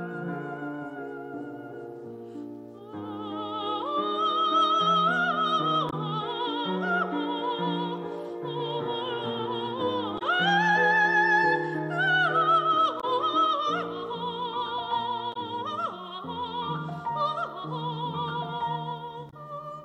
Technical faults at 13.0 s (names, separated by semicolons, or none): damaged data in a compressed stream